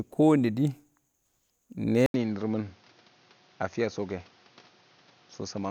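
At 2.06 s the speech cuts out for about 80 ms. When it returns, the sound is duller and boxy. Nothing is left above 6.6 kHz. The level sits about 5 dB lower, and a new background noise appears, roughly 30 dB under the speech. This persists to the end. The likely cause is an input switched to a poorer device mid-recording, one that passes a narrower band and carries its own noise.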